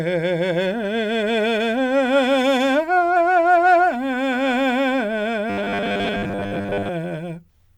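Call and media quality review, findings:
Robotic sound from repeated short buffers, 5.50–6.90 s: music turns into a rigid metallic buzz at 100 Hz, which fits a 10 ms chunk. Likely jitter-buffer underrun. Playback loops the last chunk, and most of that stretch is repeats.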